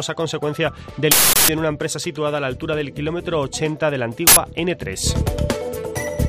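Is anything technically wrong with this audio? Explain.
Yes. Two bursts of uninitialised buffer occur, from 1.12 to 1.49 s and from 4.27 to 4.37 s. Blocks were played before any audio was written, so stale memory became loud digital noise. Unlike a click, each burst fills a whole block, lengths fitting 16384-sample and 4096-sample buffers.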